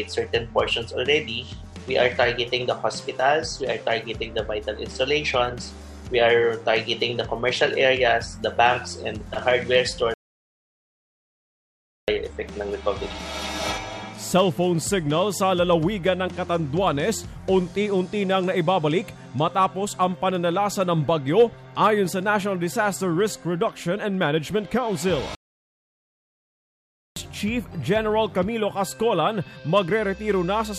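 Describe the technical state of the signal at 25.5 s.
At 25.5 s the signal is inside a playback stall that runs from 25.35 s to 27.16 s, a gap of about 1.81 s. The sound stops abruptly in mid-flow and the output stays silent for that whole stretch before the audio comes back. The likely cause is the player running short of data or its playback thread being held up, so nothing reached the output until it recovered.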